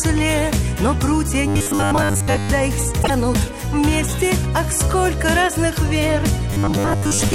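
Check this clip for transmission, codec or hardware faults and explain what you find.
Two kinds of fault show up, one of them twice.

Robotic sound from repeated short buffers, 1.48 to 2.50 s and again 6.50 to 7.33 s: new audio likely arrived too seldom, so playback looped a short stretch, about 10 ms, in place of most of the real signal. That loop imposes a rigid, metallic 100 Hz buzz that only loosely follows the underlying sound.

Broken MP3 bit reservoir, 3.02 to 3.10 s: frames likely went missing, so the next frames reached back into the reservoir and decoded another frame's bytes. The result is a brief glitch spanning about three 26.1 ms frames, where the sound jumps ahead.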